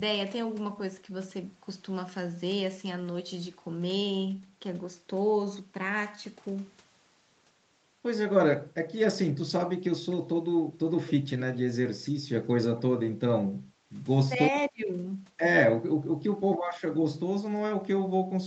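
Brief, faint repeats of the speech slip through at 11.07 to 11.12 s and again at 12.78 to 12.82 s, trailing the original by about a quarter of a second (253 ms) and sitting around 15 dB and then 20 dB below it. This is echo leak, likely from a far-end loudspeaker whose echo canceller left part of the microphone pickup in place and sent it back.

At 13.71 to 13.76 s the room sound dips by about 9 dB for roughly 50 ms and then returns. That is background gated by the echo canceller: while the loudspeaker was active, the canceller pulled the microphone down hard and released it a moment later.

The talker's own speech then sags while the other side is talking. The first dip, at 14.3 to 14.41 s, is slight, only a few dB. The next, at 14.69 to 14.9 s, is severe, around 30 dB over about 200 ms, and a third, at 16.34 to 16.67 s, drops roughly 25 dB for about 300 ms. This pattern is speech suppressed in double talk: the canceller likely could not separate its talker from the loudspeaker echo and attenuated both.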